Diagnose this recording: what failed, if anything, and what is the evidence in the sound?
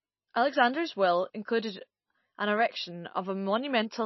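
Codec stage, likely MP3 compression: the speech has nothing above 5.8 kHz and plainly audible watery, swirling artefacts throughout, consistent with a starved encoder near 25 kbps.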